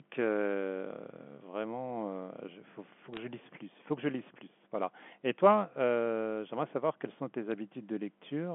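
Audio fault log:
3.13 to 3.17 s, bit errors on the digital phone line: flipped bits corrupt individual G.711 samples, producing a brief cluster of sharp ticks over the band-limited speech.
7.52 s, bit errors on the digital phone line: a few more flipped bits, at an error rate around 0.2 percent, corrupt samples across two frames.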